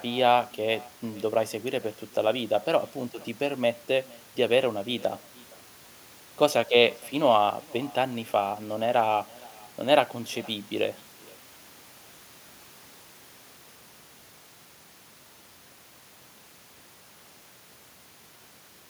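From start to finish the speech carries an echo with no canceller. The far end is playing the call through a loudspeaker, its microphone picks that sound up again, and nothing strips it out, so every phrase returns around half a second later, about 25 dB down and thinner. On a spectrogram each syllable's harmonics reappear as a faint copy shifted right by that delay. The waveform shows low tails trailing every burst.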